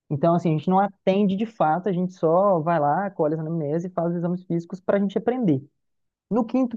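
No technical faults are audible.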